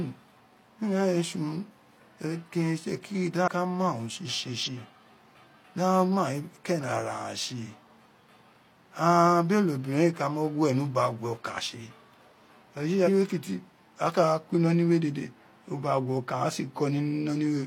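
At 3.44–3.48 s, 4.63–4.69 s and 13.04–13.09 s (just before "kiti a"), compressed frames are skipped. The decoder loses whole frames, so the speech jumps forward by about 150 ms, then about 100 ms twice, which fits a few 42.7 ms frames. Unlike a dropout, there is no silent gap.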